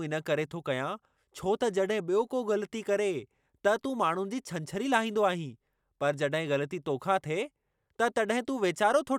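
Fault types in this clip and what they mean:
No technical faults can be heard in this recording.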